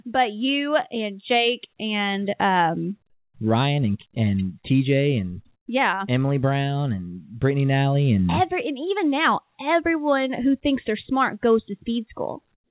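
At 5.56 to 5.68 s and again from 12.54 s to the end, the background between speech is replaced by comfort noise: a smooth, featureless hiss about 11 dB and about 10 dB quieter than the real room tone, which was already about 50 dB below the loudest speech. The likely cause is discontinuous transmission, where the sender stops sending during pauses and the receiver synthesises noise instead. All of this sits within a narrowband call sound with nothing above 4 kHz.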